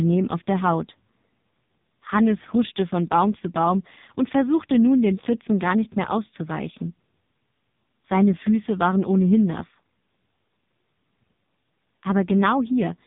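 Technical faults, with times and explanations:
Throughout: AMR narrowband mobile codec. Nothing above 3.8 kHz survives, and the speech turns heavily buzzy and synthetic, which points to a bitrate near 5 kbps. Each 20 ms frame is rebuilt from a vocal-tract model and a few pulses, so unlike a plain low-pass filter, the voicing itself sounds artificial.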